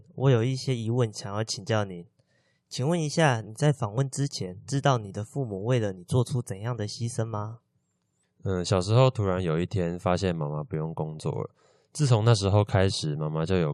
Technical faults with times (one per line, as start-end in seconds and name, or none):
3.98 overlap between stream segments